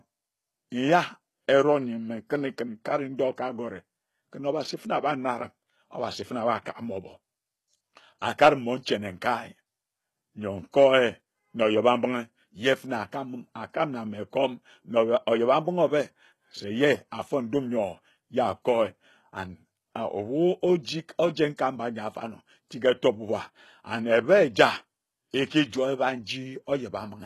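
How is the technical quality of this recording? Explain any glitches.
The recording has clearly audible coding damage throughout and one brief pre-echo glitch.

HE-AAC compression, likely, runs through the whole speech clip. Only the lower spectrum is truly coded, with the treble synthesised from copied lower bands, so s sounds turn gritty and lispy. Nothing is present above 12.3 kHz, which fits a low bitrate around 16 kbps.

Pre-echo occurs at 21.57 s. Quantisation noise spread across the codec's block leaks ahead of a sharp attack, leaving about 18 ms of hiss before the onset and making the attack sound soft and smeared.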